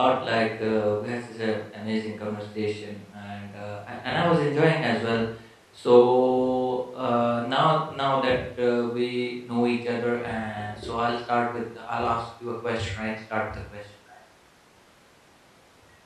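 No technical faults are audible anywhere in this recording.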